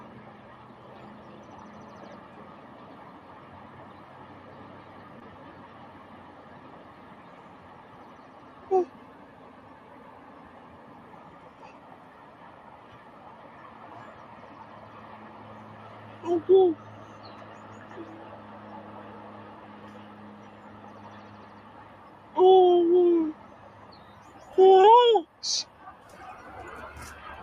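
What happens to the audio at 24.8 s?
Right around 24.81 to 24.85 s there's a short concealed packet loss. About 20 ms of audio never made it to the decoder in time, so the receiver papered over the gap by stretching out what it had just played, roughly 24 ms of made-up continuation, then crossfaded back into the real signal. You hear it as a tiny smear or wobble, where the sound briefly loses its detail.

That moment also sits under the noise suppressor applied to music or sounds, which runs through the whole clip. A speech-tuned suppressor is treating sustained tones, ambience and decay tails as noise and pulling them down, by around 10 dB at its deepest. Attacks get through while anything held sinks, so the audio pumps and thins.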